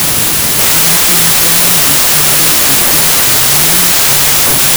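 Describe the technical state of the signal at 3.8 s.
At 3.8 s the clip is affected by a wrong sample width that runs through the whole recording. The sound points to 32-bit integer data being read as packed 24-bit, so three-byte reads drift across four-byte boundaries and only some land on the top bytes of real samples. The speech is buried in loud noise, slowed to 0.75 times speed and lowered in pitch. A spectrogram shows broadband noise filling every band, with faint, downward-compressed speech harmonics. The waveform is dense.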